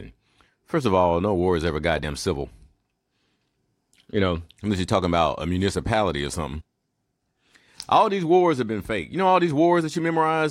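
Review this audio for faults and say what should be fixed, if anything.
Damaged data in a compressed stream causes brief glitches in the speech at 2.02 s and from 6.60 to 6.62 s, where the decoder misread corrupted frames. Unlike a plain dropout, these come from the decoder losing frame sync. Verifying file integrity with checksums, and re-fetching or re-encoding from a clean source, would prevent it.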